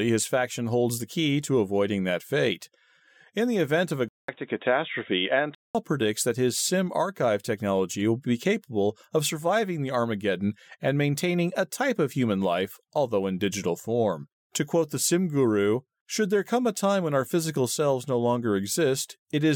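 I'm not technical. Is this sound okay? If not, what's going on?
No. From about 4.09 to 5.75 s the speech goes dull and boxy, with nothing above 3.8 kHz, a faint new background hiss, and a short gap of about 0.2 s at the switch. That's likely an input switched to a poorer device, like a headset mic.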